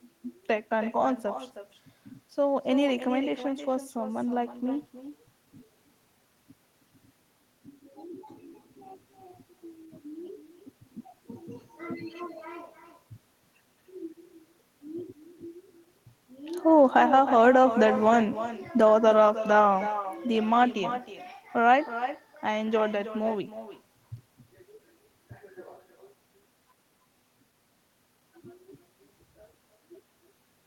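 Echo with no canceller runs through the whole speech clip, from start to end. The far end is playing the call through a loudspeaker, its microphone is picking that playback up, and nothing is subtracting it before it is sent back. Each phrase returns roughly a third of a second later, about 12 dB below the original, sounding thinner, so every syllable trails a faint shadow of itself.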